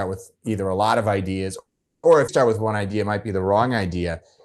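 A speech recording carried over a call path, where the Opus coding leaves a coding texture and a top end that stops near 12 kHz, which fits a super-wideband 32 kbps setting. From 1.59 to 2.05 s there is a call audio freeze: the last sound is stretched into a fading buzz that sinks to silence for about 260 ms, and then speech resumes exactly where it stopped. The likely cause is packets held up in transit until the jitter buffer ran dry. Nothing is lost; instead 440 ms is inserted and the call delay grows by that much, which separates it from a dropout that cuts material away. At 2.27 to 2.30 s the opposite happens, a skip ahead. Roughly a fifth of a second of speech is discarded, and the two sides are butted together with only a 10 ms seam. It sounds like a clipped jump rather than a pause, with no fade. From 2.59 to 4.13 s comes a jitter buffer slow-down. Single pitch periods and bits of pauses are repeated to rebuild the reserve, adding 160 ms and running the speech at about 90% speed. 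The pitch stays unchanged while sounds are drawn out, unlike a freeze's decaying buzz or a tape-style slowdown that would lower the pitch.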